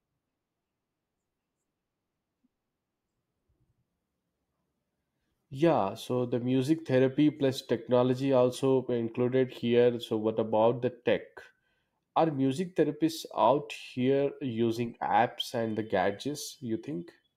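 No technical faults audible.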